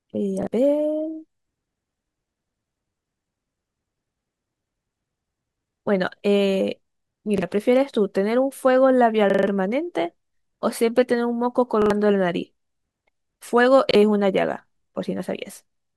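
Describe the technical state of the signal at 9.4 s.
There's a repeated buffer from 9.30 to 9.47 s. Audio arrived late, so a roughly 43 ms chunk loops four extra times, stuttering with hard joins.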